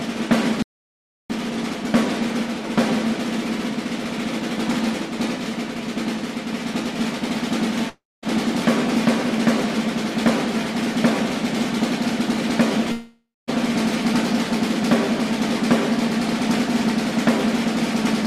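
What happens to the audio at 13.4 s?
At 13.4 s there is a gap. From 12.92 s the last sound is drawn out as a fading buzz or hiss that decays to 0.22 s of silence, and playback resumes at 13.49 s with 0.56 s lost. This is likely a long network dropout: the receiver concealed the missing audio until it ran out.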